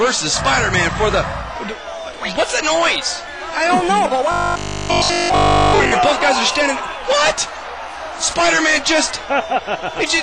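From 4.32 to 5.94 s the sound turns into a rigid, metallic drone with a fixed 50 Hz buzz: robotic sound from repeated short buffers. Incoming audio likely ran dry, so a 20 ms slice was looped over that entire stretch.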